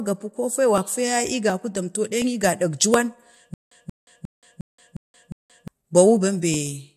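Speech carrying clock drift buffer slips from 0.78 s to 6.54 s, starting just after "gapi ko fe": a click every 0.72 s, about ten in all, likely from two clocks about 1000 ppm apart slipping roughly 30 samples each time. A stutter with silent gaps runs from 3.54 s to 5.68 s: the same 182 ms fragment repeats six times, each followed by 175 ms of digital silence (a 357 ms cycle), so the intended audio there is lost, which points to a stalled stream replaying its last buffer on each retry.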